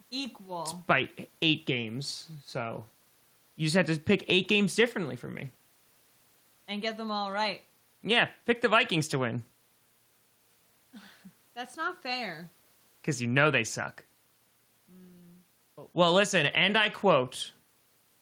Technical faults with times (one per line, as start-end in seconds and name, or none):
none